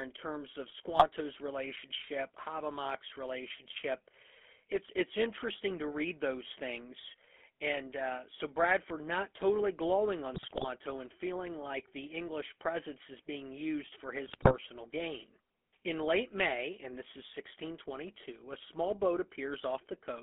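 From the first second to the end, the speech carries the GSM full-rate codec sound: a buzzy, gravelly grain, as if the voice were rebuilt from a coarse pulse train pushed through a vocal-tract filter, because only a thinned-out excitation survives. The band is squeezed to roughly 250 Hz to 3.4 kHz, so the lows are thin and the top is dull, which fits a 13 kbps full-rate stream.

Then come three bursts of GSM bit errors, where corrupted filter, pitch or gain values reach the decoder and wreck the frames they land in. The first is short, 0.92 to 1.06 s, right after "in terms of", a quick squawky pop. The second, 10.34 to 10.65 s, sits between "not totally glowing on" and "and feeling like the", and it's longer and gargly, with the spectrum lurching around. The third, 14.26 to 14.55 s, follows "is being used for" with a similar run of squawks and level jumps.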